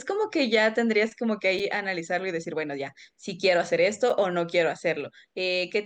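At 1.59 s the speech breaks for a brief hole, about 6.5 ms long, and the same break returns at 4.10 s. These are gaps between chunks. The audio was carried in pieces 2.5 s long, and a short silence sits at each join while no sound goes missing. Each gap is heard as a tiny hole in the sound. It differs from a packet-loss dropout in that the holes arrive on a regular 2.5 s grid and none of the sound is missing.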